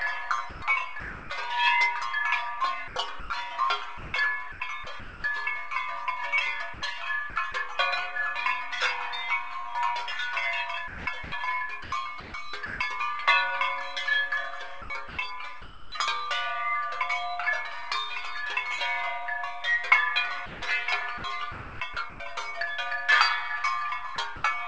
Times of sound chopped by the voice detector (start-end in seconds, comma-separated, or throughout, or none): 0.50-1.30, 2.88-5.24, 6.74-7.54, 10.88-12.80, 14.82-15.92, 20.46-22.20, 24.16-24.44